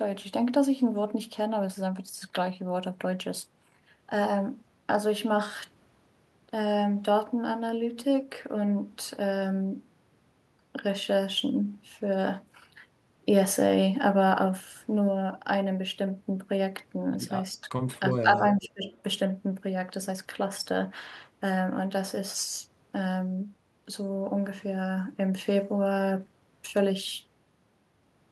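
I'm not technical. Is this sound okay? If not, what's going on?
No. Speech suppressed in double talk happens at 17.61 to 17.68, 17.91 to 17.97, 18.15 to 18.38 and 18.55 to 18.87 seconds. The voice dips in volume in short bursts, and the dips get deeper each time, so by the last one it nearly drops out. The likely cause is that both people talked at once and the call's echo-removal system, unable to tell the real voice from loudspeaker echo, turned everything down.

Echo leak appears at 18.1 to 18.21, 18.64 to 18.68 and 18.87 to 19.02 seconds. You hear a faint copy of the voice trailing about four tenths of a second behind the original, in brief, quiet scraps. This is likely because one side was using a loudspeaker, and its echo remover didn't fully clean up what the microphone picked back up, so a little of that sound was sent back down the line.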